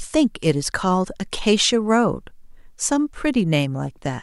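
No technical faults can be heard at any point in the recording.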